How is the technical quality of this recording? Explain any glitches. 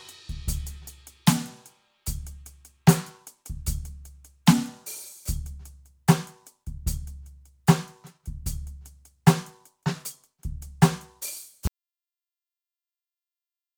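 The recording has one clear fault: an audio dropout to silence from 11.67 s that runs to the end of the clip. The input signal was likely lost, through a disconnected source, a broken link or an accidental mute, while the recorder kept writing silence. The music stops abruptly in mid-flow and never returns. The final two seconds are total silence with no room tone or noise floor, and whatever was playing then is lost.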